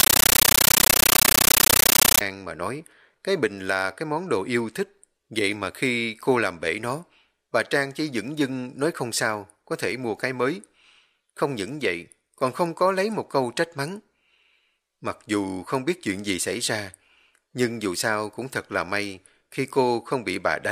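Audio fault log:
0.00 to 2.21 s, compressed stream played as audio: an AC-3 bitstream is treated as plain samples, so the opening is very loud chattering static. Noise bursts about 13.3 ms long repeat 31.25 times a second, and each gap is dead silence. A spectrogram shows broadband vertical stripes, and the waveform looks like a comb of tall blocks.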